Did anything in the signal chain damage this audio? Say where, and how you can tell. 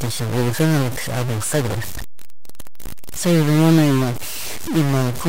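Yes. A distortion rides on the speech for the whole clip, and the pauses between phrases are not silent but filled with a gritty noise floor that flickers as the signal crosses zero. This is likely a stuck bit at the converter or in the digital wiring after it: one data bit held at a fixed value shifts roughly half the samples by that bit's weight, and near silence every sign change toggles it, which produces the noise.

At 2.86 to 2.92 s there is a short burst that clearly does not belong to the speech. Its energy sits at the wrong frequencies and peaks around -20 dBFS. This is a corrupt frame decoded at the codec stage. Damaged bits in a few consecutive compressed frames, around three, were decoded rather than concealed. Misread gains and spectral codes put energy in the wrong places for just the span of those frames.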